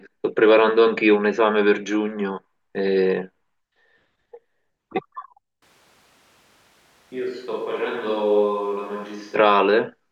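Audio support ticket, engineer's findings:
Speech turns roomy, hollow and thin from 5.63 s to 9.35 s, with sudden changes in and out. Level down roughly 10 dB, room noise rising to about 35 dB below speech. Likely switch to a distant microphone after close-mic signal loss.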